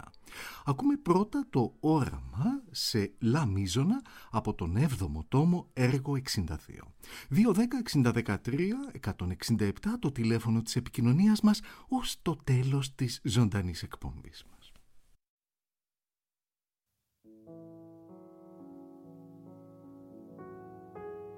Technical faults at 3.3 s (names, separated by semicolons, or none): none